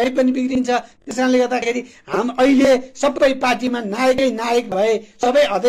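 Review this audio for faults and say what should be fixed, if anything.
Repeated buffer at 1.02 to 1.07 s and at 4.64 to 4.67 s: fresh audio arrived late, so the last 23 ms block replayed, twice then once, which fits a 1024-sample buffer. Each gives a brief stutter with hard joins, with essentially no audio lost. To prevent it, keep the playback buffer fed on time by enlarging it or giving the audio thread higher priority.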